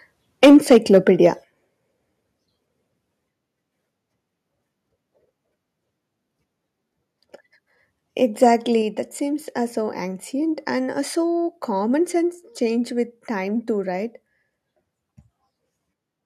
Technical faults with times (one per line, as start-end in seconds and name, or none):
0.43-1.27 microphone overload
0.45 microphone volume stepped down
1.44 microphone volume stepped down
8.43-8.47 microphone overload
8.82 microphone volume stepped down